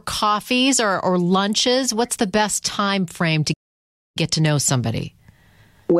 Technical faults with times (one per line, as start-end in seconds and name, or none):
3.53-4.17 playback stall